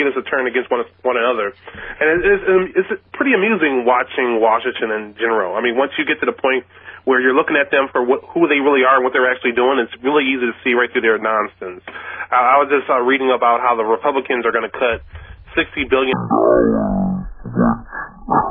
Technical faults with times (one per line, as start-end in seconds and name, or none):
16.13-18.51 wrong sample rate